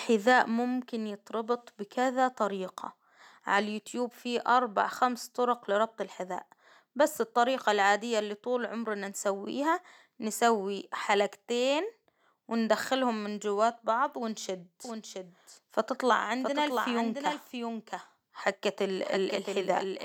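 A doubled audio track starts at 14.85 s, just after "من جواة بعض ونشد", and lasts to the end. A dry, full-band copy of the speech cuts in abruptly, trailing about 0.7 s behind at roughly 5 dB lower, likely from a second, slower capture path.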